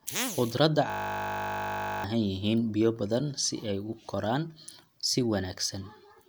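From 0.9 to 2.04 s, a system hang loop repeats one 20 ms slice of speech, producing a steady 50 Hz buzz. About a second of audio is lost.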